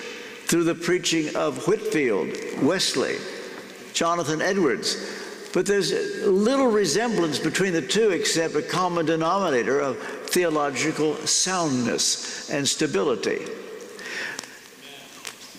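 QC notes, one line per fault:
No faults found. Nothing in the audio calls for a timed entry.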